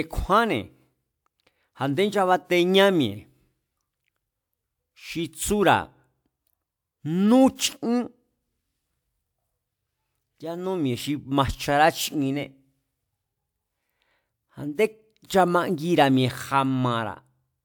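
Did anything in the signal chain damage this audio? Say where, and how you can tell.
No, nothing in the signal chain damaged this speech.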